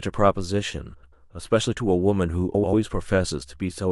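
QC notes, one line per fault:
0.93–1.13 s and 2.54–2.73 s, frames out of order. In each stretch, two neighbouring blocks of audio play in swapped order. The blocks are about 93 ms in the first stretch and about 83 ms in the second, which fits runs of four codec frames each. The sound turns into a brief garbled flutter. Nothing is missing. The timing is only scrambled.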